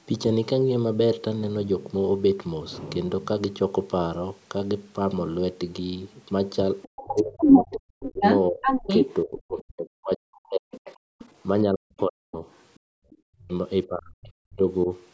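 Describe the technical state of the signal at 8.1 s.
At 8.1 s, an echo canceller that likely failed to remove the loudspeaker signal lets the other side's voice leak through from 6.82 to 9.62 s. The echo sits a few decibels above the talker's own speech. At the same moment, speech is suppressed in double talk, as the canceller likely treated the overlapping voices as echo and turned both down. From 7.01 to 14.88 s, about five seconds in total, the talker's speech dips and breaks up, at its deepest by around 40 dB.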